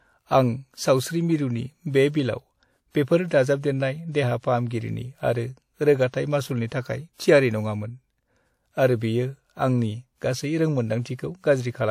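Speech with pre-echo at 4.38 s and 6.09 s: block-wide codec noise smears about 50–57 ms of hiss ahead of each attack, visible as a broadband haze before the onset.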